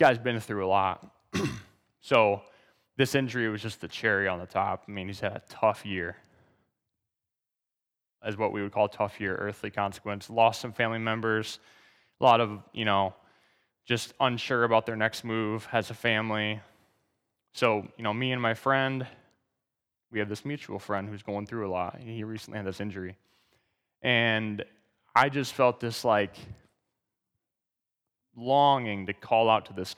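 Brief crackles break through this speech on its louder peaks at 0.04–0.10 s (just before "been through a"), 2.14 s, 10.42 s, 12.26–12.31 s (between "some family members a" and "of you know"), 17.64 s (before "you know me and") and 25.17–25.23 s. This is hard clipping: peaks driven about 0 to 4 dB past what a stage can pass are sliced flat, and those squared tops spray high harmonics that register as the short gritty bursts.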